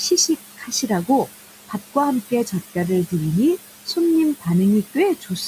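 A speech recording, with room noise sitting about 13 dB below the voice, shows noise suppressor artifacts throughout. The suppressor pulls the background down by about 15 dB frame by frame. The leftover noise dips between phrases and swells under them. Speech cut by the noise suppressor occurs three times: 0.57 to 0.9 s, 2.3 to 2.53 s and 5.15 to 5.42 s. Parts of the speech are mistaken for noise and drop by about 13 to 14 dB. Each event swallows a fraction of a second, leaving syllables faint.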